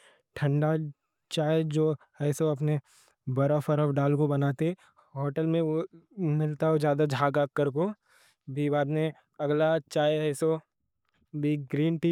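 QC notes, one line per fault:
No technical faults can be heard anywhere in the recording; the signal stays continuous and stable throughout.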